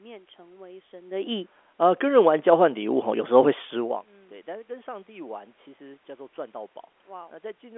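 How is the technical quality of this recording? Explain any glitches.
Nothing stood out as a technical glitch on listening to this recording.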